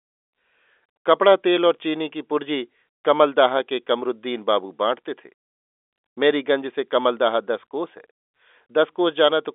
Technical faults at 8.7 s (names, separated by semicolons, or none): none